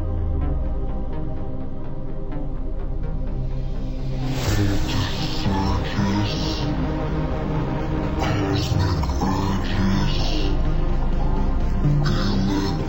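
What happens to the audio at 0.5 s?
At 0.5 s, as everywhere in the clip, the audio suffers from stereo read as mono: left and right samples are played in sequence as one channel, so everything runs at 0.5x speed and sounds an octave (12 semitones) low. A spectrogram shows stretched, lowered content with a fainter mirror image in the upper half.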